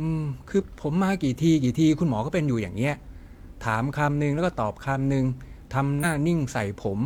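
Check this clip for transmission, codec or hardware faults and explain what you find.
Two spots of compressed frames skipped. At 0.56–0.63 s the speech jumps ahead about 50 ms, and at 5.99–6.05 s about 100 ms, which fits one and then two lost 46.4 ms frames. At each join the missing frames are simply not played, so the speech jumps ahead.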